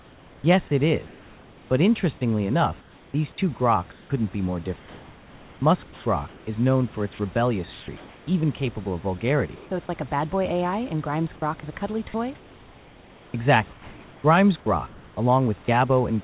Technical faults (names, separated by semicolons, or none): comfort noise in place of the background; onset clipped by the voice detector; sound chopped by the voice detector